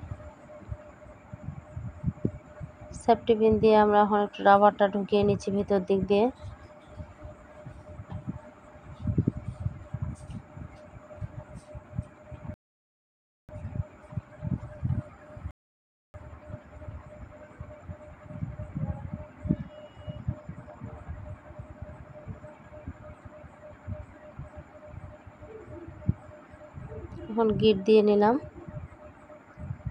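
At 12.54 s the audio stops dead for about 0.95 s, then picks up exactly where it left off. At 15.51 s it happens again, for about 0.63 s. Both are rebuffering stalls. Playback outran the download and waited for more data. Nothing is skipped. Only silence is added.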